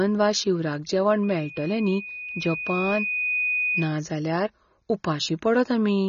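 A speech recording with two faults. Throughout, nothing reaches above 7 kHz, and the band below carries plainly audible codec damage: dull, smeared consonants with a warbling, fizzy edge on sibilants. This is most likely AAC compression at a low bitrate, which fits AAC-LC at around 24 kbps. A plain low-pass filter would cut the top cleanly, whereas this coder starves and reshapes the remaining bands, so the texture itself turns watery. From 1.23 to 4.01 s there is a loudspeaker feedback squeal, a single tone at 2.5 kHz. It swells over roughly two seconds until it is about as loud as the speech, then stops. That self-building growth at one pitch separates it from a whistle picked up by interference, which would appear at full level and keep a steady level.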